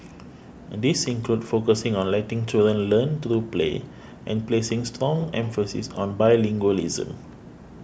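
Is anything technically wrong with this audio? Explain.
No, nothing is technically wrong with this audio.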